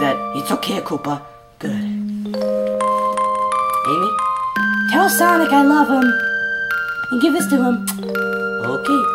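Nothing stood out on listening to the recording.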